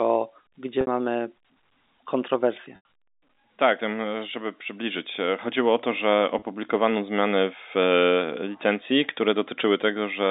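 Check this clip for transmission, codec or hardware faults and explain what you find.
Three concealed dropouts are the only fault.

Packet loss with pitch repetition occurs at 0.81–0.87 s (60 ms), 2.76–2.85 s (90 ms) and 6.39–6.42 s (30 ms). The gap lengths fit 30 ms packets. The receiver bridged each gap by repeating the last pitch period and fading it out. The sound briefly holds on a buzzy, sustained tone. At 2.76 s the repetition sinks toward silence before the speech cross-fades back in. All of this sits within the narrow telephone band of the G.711 line.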